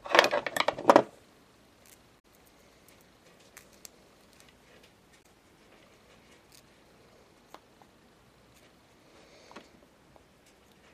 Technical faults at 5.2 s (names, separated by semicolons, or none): damaged data in a compressed stream